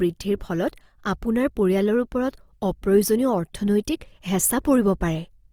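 Opus compression throughout: the speech turns rough and grainy, likely from the codec's music mode filling bit-starved bands with noise, fitting about 24 kbps, though still reaching 20.4 kHz.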